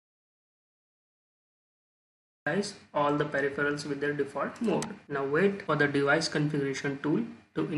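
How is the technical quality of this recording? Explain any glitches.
The recording has one clear glitch, at the very start. An audio dropout to silence runs from the opening until 2.47 s: the clip begins already inside the gap, with silence and no room tone or background hiss at all, and the sound then cuts in abruptly mid-flow. That silent stretch is the signature of a lost input, likely a disconnected device, failed link or stray mute, while the recorder kept writing silence. Whatever occurred during those first 2.47 s is unrecoverable.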